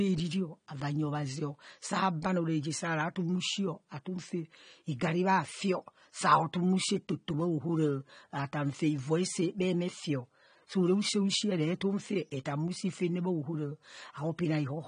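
Throughout the speech, the sound is dull and smeared, with a warbling, fizzy edge on sibilants, most likely from AAC compression at a low bitrate of around 32 kbps. A spectrogram shows nothing above 9.7 kHz.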